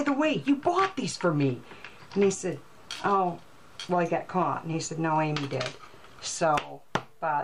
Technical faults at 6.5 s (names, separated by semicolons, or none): none